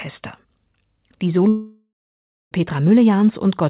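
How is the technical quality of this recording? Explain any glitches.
The recording has one clear glitch, a break in the speech from 1.48 s to 2.53 s. The audio is narrowband call audio with nothing above 4 kHz, which fits G.711 mu-law at 64 kbps.

Long network dropout, 1.48 to 2.53 s: about 1.04 s of audio never arrived, most likely because of a network outage. The receiver stretched the last sound into a fading buzz, then left 0.6 s of near-silence. A spectrogram shows smeared, decaying bands and then a blank gap, and the waveform shows a tapering envelope that flattens out before the speech resumes with that section missing.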